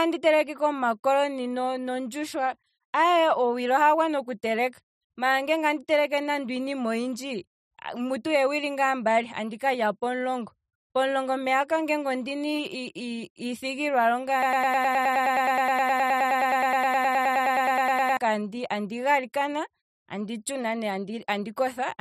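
At 14.43 s the speech locks into a broken-record loop that runs until 18.17 s. A fragment of about 0.10 s (104.76 ms) repeats identically, back to back, 36 times, producing a rapid, mechanical stutter at roughly ten cycles per second. The likely cause is a stall in the player, encoder or stream that kept re-sending the last buffered fragment. The speech that should have played across those 3.7 seconds is missing.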